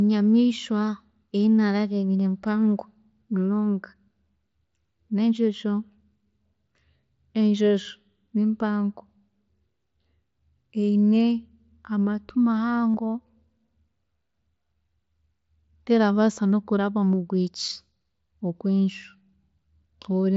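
At 12.93 s there is concealed Bluetooth headset packet loss. About 45 ms of the speech is missing, consistent with a short run of lost headset packets. The receiver fills the gap by repeating the closest-matching recent waveform, giving a brief buzzy hold and a slight warble as the mSBC audio resumes.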